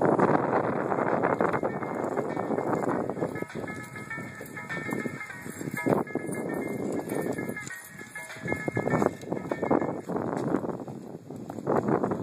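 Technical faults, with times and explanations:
Nothing stood out as a problem on listening.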